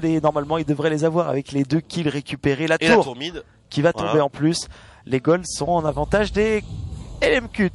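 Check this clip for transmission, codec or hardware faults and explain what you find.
MP3 compression artefacts run through the whole clip. The damage is plainly audible: the upper detail has a watery, swirling quality as faint components flicker in and out between frames. Sharp onsets smear and hiss-like content turns metallic and chirpy. This is likely an MP3 encoder starved of bits, which fits a low rate of around 48 kbps, forcing it to discard weak spectral lines.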